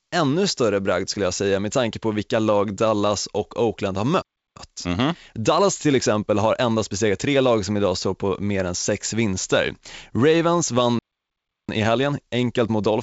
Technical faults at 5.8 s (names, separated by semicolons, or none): time-compressed catch-up